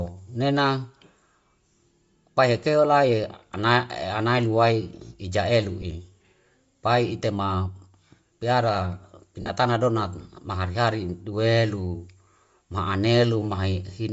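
Throughout, the speech carries a breathy, grainy edge in the upper band, likely from Bluetooth LC3 compression, which fits a low bitrate near 32 kbps with noise-filled highs.

At 5.82 to 5.84 s, lost LE Audio frames cause a brief noisy smear, consistent with a single 10 ms frame concealed from the previous spectrum.

From 9.41 to 9.50 s, lost LE Audio frames return, with about 70 ms missing over 80 ms. The longest gap, around 50 ms, smears and fades as concealment repeats the old spectrum.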